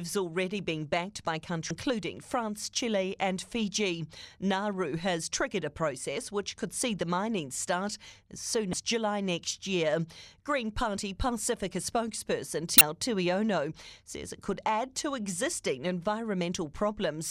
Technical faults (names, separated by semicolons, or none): damaged data in a compressed stream